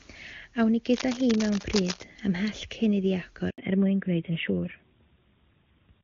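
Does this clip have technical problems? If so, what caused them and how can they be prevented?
Yes. From 0.93 to 2.04 s, dense, uneven scratching and rustling sits over the speech at a fairly high level, not far below it. This is cable scratch noise. A worn cable or connector being moved is the likely cause. Its contact resistance jumps rapidly, injecting noise bursts. Replace worn cables and keep connectors still during recording.

At 3.50 s the speech cuts out for 80 ms. This is a handover gap. The call switched networks, and no speech frames arrived until the new link was up. That stretch of speech is simply lost. Stable coverage reduces these switches.

From 3.58 s to the end, everything above 4 kHz is gone. This is a fallback to narrowband. The call dropped from HD Voice, AMR-WB at 23.85 kbit/s, to AMR-NB at 12.2 kbit/s. The voice turns duller. Keeping both ends on HD Voice-capable networks prevents this.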